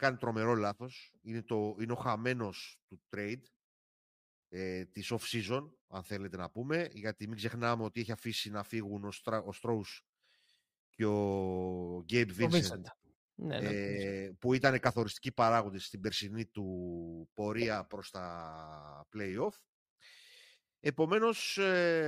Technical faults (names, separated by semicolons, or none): none